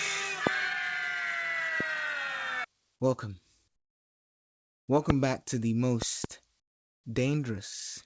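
From 3.68 to 4.88 s, comfort noise in place of the background fills a 1.2 s pause: the quiet room tone, already about 48 dB below the loud parts, gives way to a flat, featureless hiss roughly 21 dB lower, likely synthesised by the receiver during discontinuous transmission. A loud pop lands at 5.10 to 5.12 s, just before "back to the", a single sharp click peaking around 20 dB above the sound, likely from a voltage step or driver glitch. Right after "back to the", 6.02 to 6.26 s brings a double pop of similar strength, the sound continuing underneath. From 6.60 to 7.04 s, comfort noise again replaces the background for 440 ms, the substituted hiss sitting about 25 dB below the original room tone, with G.722 band-limiting leaving nothing above 8 kHz.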